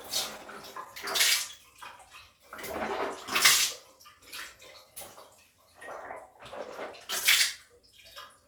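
A clip of everyday sounds with clock drift between sender and receiver running through it. The sender's clock runs roughly 1.5% slow. The receiver's buffer keeps draining, so the timing stumbles slightly and unevenly across the whole clip. Repeated timing corrections occur from 0.77 to 5.37 s and again from 7.66 to 8.41 s. The receiver stretches the audio to refill its buffer. The first stretch plays at 99% speed and adds about 70 ms. The second plays at 96% and adds about 40 ms. Both are made of small, unevenly spaced edits.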